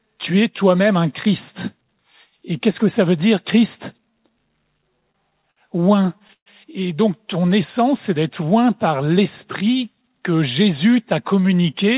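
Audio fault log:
4.78–6.48 s, repeated stalls (stutter): late-arriving packets emptied the jitter buffer over and over, so the last sound was stretched in gaps up to 131 ms. Nothing drops out, unlike packet loss.
9.02–9.76 s, jitter buffer speed-up: a backlog was trimmed by cutting about 50 ms of pitch periods, so the audio runs 6% fast at unchanged pitch, unlike resampling.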